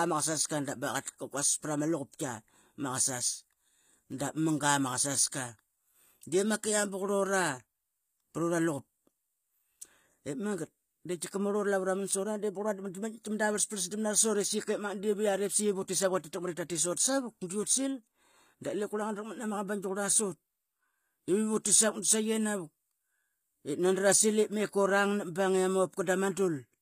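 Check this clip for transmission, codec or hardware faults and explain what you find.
One codec fault is present across the whole speech clip. HE-AAC compression, throughout, is the likely cause: the upper band is rebuilt by copying lower bands upward under a coarse envelope, which fits a low bitrate around 24 kbps. Sibilants sound gritty and metallic, the damage is plainly audible, and nothing remains above 15.5 kHz.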